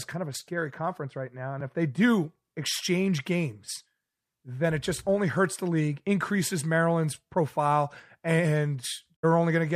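A digital broadcast dropout occurs from 9.15 to 9.25 s, near the end of the speech. The receiver stopped getting usable frames, either because the signal was lost or because frames failed their checksum, so it muted rather than play corrupt data. The speech fades out over about 20 ms into a silent gap of roughly a tenth of a second, consistent with a couple of lost frames, and whatever was transmitted during that gap is gone.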